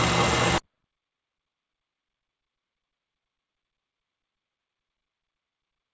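At 0.58 s, a stretch of audio was discarded while later material was already queued, either lost in transit or dropped by a jitter buffer that had overflowed. This is a skip ahead. Roughly a fifth of a second of sound is missing, and there is no fill or pause. Playback jumps straight from one side of the hole to the other, so the sound lurches forward abruptly, cutting the delay by about the same amount.

From 1.13 s to 1.55 s there is a jitter buffer speed-up. The receiver was holding more audio than its target and trimmed the excess by deleting short pitch-period-sized pieces one after another, a few tens of milliseconds in total. Over this span the sound runs at about 109 percent of normal speed with its pitch unchanged, giving a briefly rushed, compressed quality. Throughout the clip, nothing is heard above 8 kHz, consistent with a wideband call codec such as G.722.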